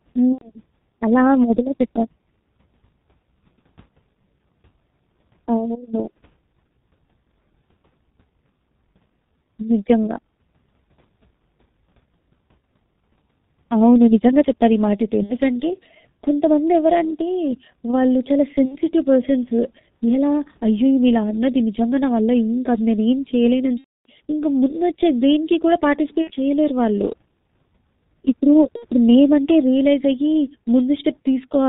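The speech has been squeezed through the G.723.1 codec at about 6.3 kbit/s, which coarsely models the voice in 30 ms frames and discards everything above 4 kHz. The damage is heavy: the whole clip sounds muffled and hoarse, the spectral model lags behind fast changes, and consonants smear into one another rather than landing crisply.

On top of that, VoIP packet loss concealed by the speech codec occurs six times, at 0.33–0.51 s, 15.23–15.37 s, 18.65–18.80 s, 23.78–24.10 s, 26.21–26.32 s and 28.77–28.87 s. In each gap the decoder keeps repeating its last pitch and filter while turning the level down, so the sound stretches into a buzzy tone or a coloured noise that fades. The short gaps point to two or three lost frames. The one at 23.78 s, about 0.31 s long, suggests around nine lost frames and gives the longest gap, muted from the third lost frame onward.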